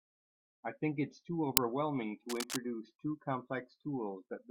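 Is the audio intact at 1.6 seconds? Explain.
No. At 1.57 s an uninitialised buffer fault occurs: a 5 ms block was sent to the output before any audio had been written into it, so stale memory contents were played as samples. This is heard as a loud crack cutting through the speech.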